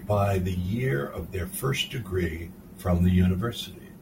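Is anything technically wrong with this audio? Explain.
No, nothing technically wrong turns up in this speech recording, so there's nothing here to flag.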